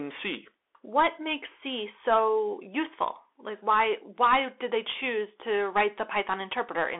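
Bluetooth CVSD headset codec damage runs throughout. Sound sits between 300 Hz and 3.5 kHz, with nothing above 3.8 kHz. One-bit adaptive steps leave plainly audible grainy distortion.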